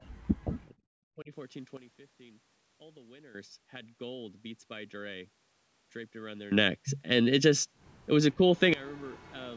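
In the first 1.3 seconds the speech dips sharply at 0.0 to 0.21 s, 0.4 to 0.77 s and 1.16 to 1.31 s, losing roughly 30, 40 and 15 dB. This is likely speech suppressed in double talk: an echo canceller mistook the overlapping talk for echo and attenuated it.

From 6.52 s to 8.74 s there is a sudden gain jump. Speech and background noise both rise abruptly by 19 dB, then drop back, with no fade at either edge. The likely cause is digital gain applied without a ramp.

Within that louder stretch, a brief double-talk dip at 8.36 to 8.41 s removes roughly 10 dB.

Echo leak follows: a faint delayed copy of the speech appears at 8.55 to 8.60 s and again at 8.86 to 9.32 s, trailing by 434 ms at about 35 and 30 dB below the direct signal. This is likely residual loudspeaker pickup that the far end's canceller failed to remove.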